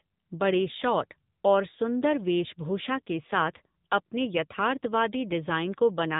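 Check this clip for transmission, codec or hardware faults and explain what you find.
There is one fault, present for the whole clip: AMR narrowband mobile codec damage. The speech sounds thin, buzzy and synthetic throughout, with nothing above 3.8 kHz. AMR-NB samples at 8 kHz and rebuilds the voice from a vocal-tract model fed sparse pulses in 5 ms subframes. The plainly audible roughness fits a low bitrate near 7.95 kbps.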